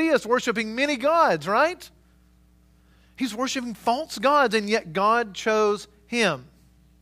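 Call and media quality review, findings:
Clock slip clicks, 0.47 to 6.60 s: faint regular ticks in the speech, roughly every 0.7 s, around ten in all, each one a single-sample jump. Likely cause is two devices on free-running clocks with nothing syncing them, off by something like 30 ppm, so a sample gets dropped or repeated each time the drift adds up to a whole sample.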